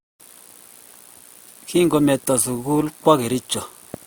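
Speech that shows transcoding between lossy codecs, likely an MP3 encode at something near 96 kbit/s followed by an Opus encode near 48 kbit/s. Artefacts from both codecs sound together across the whole clip, and nothing remains above 20.2 kHz.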